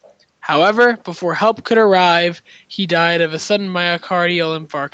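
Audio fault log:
Nothing stood out on listening to this speech, which comes across as ordinary call audio with its content stopping at about 8 kHz, as expected from the call's processing and codec.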